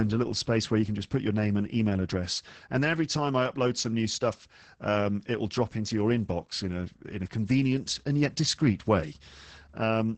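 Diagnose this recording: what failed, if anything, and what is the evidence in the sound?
The codec stage is at fault here: this is Opus voice compression, and heavily squeezed. Through the whole clip the speech is muffled and a bit hoarse, with a faintly robotic edge, and nothing survives above 8.6 kHz. That's the wideband SILK coder at work, predicting the vocal tract and coding the excitation very coarsely. The amount of damage fits a starved bitrate somewhere around 10 kbps.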